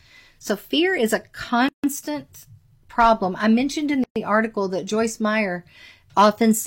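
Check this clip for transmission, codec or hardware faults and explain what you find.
The clip has two kinds of fault: two silent gaps at joins between separately encoded pieces, and two short bursts of hard clipping.

The first gap at a join of encoded pieces runs from 1.69 to 1.84 s, right after "fear is a", and lasts about 151 ms. The second runs from 4.04 to 4.16 s, about 121 ms, between "I mentioned in" and "article that". Each piece was encoded on its own and the pieces were butted together untrimmed. That leaves the encoder's start-up delay and last-frame padding in place as dead air. The speech stops with a smeared edge and then resumes where it left off.

Hard clipping occurs from 2.99 to 3.12 s, just before "I mentioned in", with the signal driven about 3 dB past the limit. It occurs again from 6.19 to 6.26 s at about 4 dB over. In both spots the peaks exceeded what a stage in the chain could pass and were sliced flat. 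The squared-off tops generate high harmonics, heard as a brief crackly harshness on the loudest moments.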